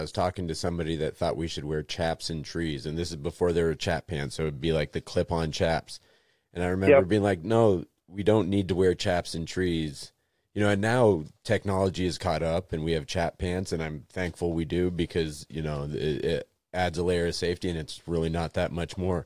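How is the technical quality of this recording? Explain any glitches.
No technical glitches can be heard anywhere in this recording.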